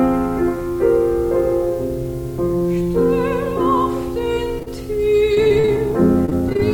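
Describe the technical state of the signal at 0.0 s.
At 0.0 s the audio is intact, with no fault present at that moment.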